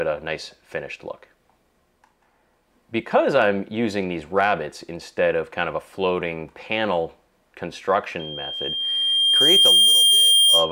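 Loudspeaker feedback squeal starts at 8.19 s and continues to the end. A microphone is picking up the loudspeaker it feeds, and at 3.2 kHz the loop gain exceeds one, so that tone swells over roughly one and a half seconds into a squeal around 10 dB above the sound.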